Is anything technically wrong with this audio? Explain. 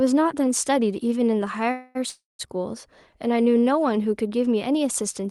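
Yes, there are two call audio freezes close together, at 1.71 to 1.97 s and again at 2.09 to 2.49 s. Each time, the last bit of sound gets stretched into a fading buzzy smear, and in the second one it dies away to near silence for about 190 ms before the audio picks up right where it left off. The likely cause is packets stalling in transit so the jitter buffer runs dry. Nothing is lost, but playback ends up pushed later by roughly a quarter second and then about 0.3 s more.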